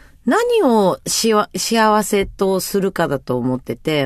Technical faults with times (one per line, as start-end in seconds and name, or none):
none